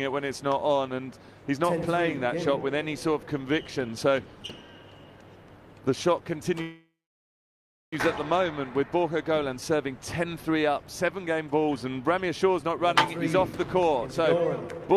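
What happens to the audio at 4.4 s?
Nothing goes wrong at 4.4 s; the audio runs through that moment intact, with no dropout, click or other disturbance.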